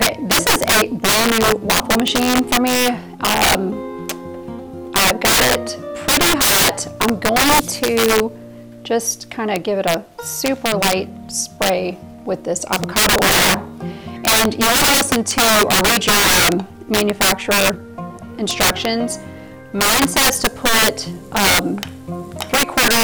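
Integer overflow runs through the whole clip: the signal is driven about 18 dB too hot, and roughly one sample in fourteen exceeds the integer limit. Instead of being held at full scale, each one wraps to the opposite sign, so loud peaks snap into violent cracks far harsher than clipping.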